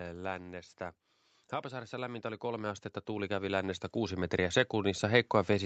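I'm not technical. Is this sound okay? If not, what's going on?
No. From about 1.61 seconds until the end of the clip, the speech and the background noise behind it slowly get louder together, as if someone were gradually turning up a volume knob. This is automatic gain rising. The call's automatic gain control judged the incoming sound too quiet and kept raising its level bit by bit. It can't boost only the voice, so the background swells along with it.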